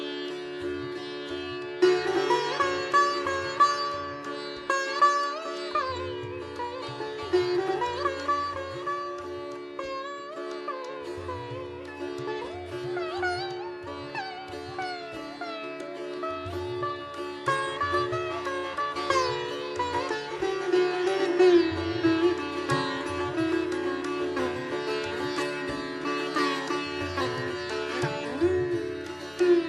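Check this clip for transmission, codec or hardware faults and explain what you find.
No faults turn up in the clip.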